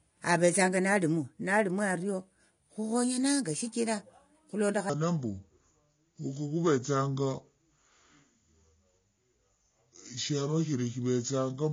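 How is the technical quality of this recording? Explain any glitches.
The recording has clear technical problems: a constant roughness, plainly audible codec damage, and a large drop in speed and pitch for the second half.

Throughout, the speech carries a fine hiss that grows on loud and bright passages and disappears in pauses. That is sample clock jitter: the converter's timing wanders by roughly half a microsecond, and those timing errors add noise around 35 dB below the signal.

Also throughout, the speech sounds dull and smeared, with a fizzy, warbling texture on sibilants. The likely cause is AAC compression. The damage fits AAC-LC at a low bitrate around 32 kbps, which lowers the bandwidth and coarsely quantises the spectrum.

From 4.90 s to the end, the speech turns deep and slow. This is a section at the wrong speed, running at 0.72 times normal. Pitch falls with it by roughly five semitones, likely because that part was played back against the wrong clock.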